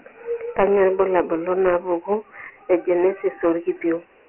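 Throughout, the speech passed through Dialogic VOX ADPCM coding, which fits a 24 kbps stream: nothing above 3 kHz survives, and gritty hiss trails the speech.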